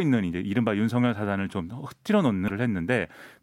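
At 2.44 s, a burst of damaged data in a compressed stream lasts about 0.05 s. The decoder misreads corrupted frames there and loses sync. It hunts for the next frame header. The speech breaks up briefly, then resumes at 2.50 s.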